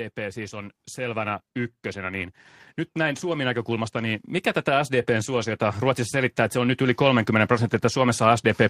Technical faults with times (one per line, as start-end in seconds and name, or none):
0.15-2.40 automatic gain rising
2.93-8.70 automatic gain rising